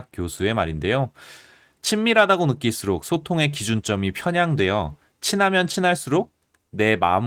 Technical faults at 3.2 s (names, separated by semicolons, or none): none